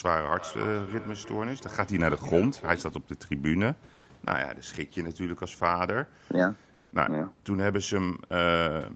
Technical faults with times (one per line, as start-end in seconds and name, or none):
0.39-3.06 feedback echo between two devices
3.93-4.05 comfort noise in place of the background
6.73-6.91 comfort noise in place of the background